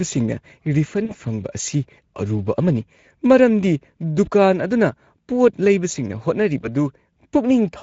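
Speex codec damage runs through the whole speech clip: a coarse CELP excitation leaves it plainly hoarse and noisy, consistent with a setting of about 16.8 kbps. VoIP packet loss concealed by the speech codec occurs at 1.05 to 1.13 s, 4.25 to 4.29 s and 6.61 to 6.69 s. In each gap the decoder extends its last pitch and filter with fading gain, producing a short stretched smear, and the sound stays weak just after.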